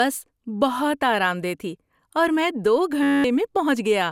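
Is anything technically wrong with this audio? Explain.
Yes, two faults are audible in this speech.

Throughout, the sound is swirly, smeared and hollow, with blurred attacks and nothing above 17.4 kHz. This is likely generation loss: the audio went through repeated lossy encoding, probably MP2 at 128 kbit/s about four times, with each pass re-quantising on a shifted frame grid so noise and spectral gaps accumulate.

From 3.03 to 3.24 s, the speech gives way to a steady buzz at 93.8 Hz. This is a system hang loop: the system stalled while the audio hardware kept replaying one 10.67 ms chunk, which fits a 512-sample buffer, twenty times over, so roughly 200 ms of audio never arrived.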